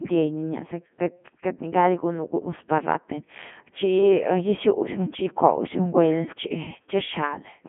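From start to finish the speech passes through a Codec 2 vocoder, apparently its highest-rate mode, around 3.2 kbit/s. Only pitch, voicing, energy and spectral envelope survive; the decoder rebuilds the voice from sine waves, giving a heavily buzzy, robotic sound confined to roughly 150 Hz to 3.4 kHz, with nothing above 3.6 kHz.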